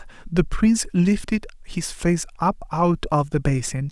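No technical faults occur at any point in this speech recording, so there is nothing to set out in time order.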